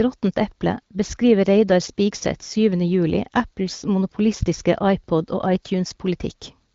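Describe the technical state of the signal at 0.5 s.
At 0.52 s a block of digital silence interrupts the speech: a run of samples lasting about half a millisecond drops out, then resumes without any fade. A gap this short is heard as a tick or dip rather than as silence.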